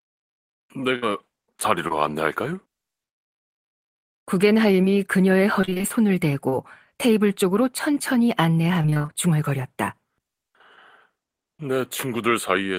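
Throughout, channel delay (comb filtering) colours the sound. One channel runs a few samples late, roughly a tenth of a millisecond, and the two are summed to mono. Shared content cancels at evenly spaced frequencies, the first notch near 5 kHz. The top end sounds thin and hollow.

From 0.95 to 1.04 s comes a burst of packet loss. About 60 ms of audio is missing. The receiver extends the last sound for 66 ms and lets it fade. It becomes a brief held buzz or hiss, then jumps ahead.

Short concealed packet loss follows at 1.88 to 1.92 s, 4.82 to 4.85 s and 6.49 to 6.54 s. Each time about 20 ms never arrives. The decoder patches it by continuing the last sound. Each one is a tiny smear or wobble.

Repeated packet loss (robotic sound) hits 5.61 to 5.85 s with six gaps, and 8.82 to 9.10 s with seven. Half of each stretch is patched, with gaps up to 27 ms and 21 ms. The sound turns choppy, with fragments missing.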